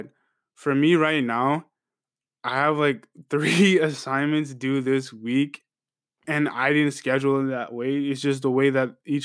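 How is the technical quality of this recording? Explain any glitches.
No technical faults are audible anywhere in the recording, so there are no glitches to explain.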